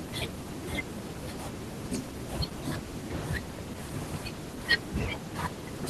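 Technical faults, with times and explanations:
No technical faults can be heard anywhere in the recording, and the speech signal holds steady from its opening to its close.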